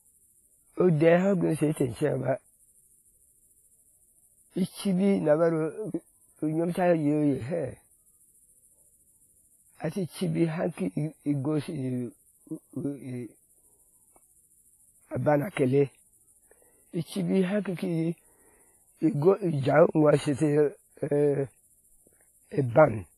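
Likely heavy WMA compression, at a bitrate fitting about 24 kbps, leaves the speech ringing and washy throughout, with pulsing hiss and nothing above 15.4 kHz.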